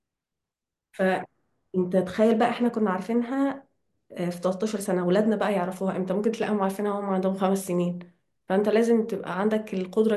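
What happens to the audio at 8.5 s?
Nothing goes wrong at 8.5 s; the speech carries on intact through that moment, with no dropout, click or distortion.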